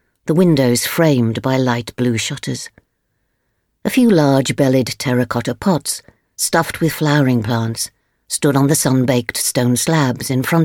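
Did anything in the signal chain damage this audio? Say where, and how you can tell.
No, nothing in the signal chain audibly damaged this audio; there are no dropouts, clicks, distortion or other defects anywhere in the clip.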